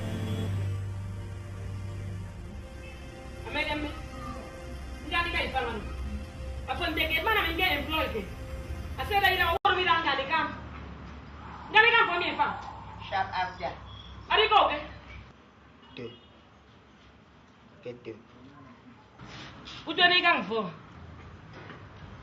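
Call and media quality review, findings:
Adaptive stream at a lower bitrate, 0.88 to 6.88 s. Abrupt drop in quality with no gap, treble gone above 12.1 kHz, more codec artefacts. Points to the player falling back from roughly 64 to 12 kbit/s Opus while throughput dipped, then recovering.

Input switched to a poorer device, 9.57 s to end. 80 ms silence at the switch, then band capped near 7.3 kHz and duller tone, new noise floor about 50 dB below the signal, no real level change. Likely a capture-device change mid-recording.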